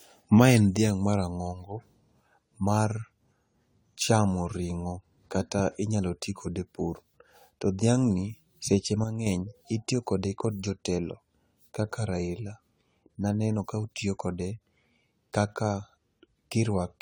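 A speech recording with smeared, swirly, hollow texture throughout and blurred consonant attacks, more degraded than a single encode would produce. This is likely generation loss: the sound fits about ten successive AAC-LC encodes near 96 kbit/s, each requantising on a shifted frame grid. From 9.04 to 9.27 s, between "dhiang'ni seche" and "itiyo kode kod jotelo", the level falls abruptly by about 6 dB and then recovers. That step likely comes from one channel dropping out, leaving only half the mono sum.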